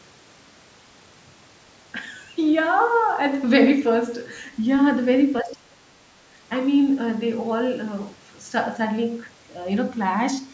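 From 5.42 to 6.25 s the speech sinks by as much as about 30 dB, with roughly 0.7 s of it audibly ducked or chopped. This is likely speech suppressed in double talk: the echo canceller mistook the talker for loudspeaker echo. Unlike a network dropout, the level dips and recovers in uneven pieces instead of vanishing cleanly.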